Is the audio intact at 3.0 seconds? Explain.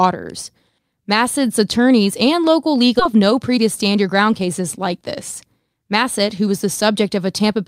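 No. At about 2.99 to 3.01 s, right after "attorneys and local", the speech has a skip ahead: roughly a second of audio was dropped while later audio was already queued, so playback jumps forward with no gap filled. The two sides are spliced almost directly, giving an abrupt, clipped transition mid-phrase. On a waveform or spectrogram this shows as a hard seam, with the harmonic and formant patterns changing instantly and no silence between them.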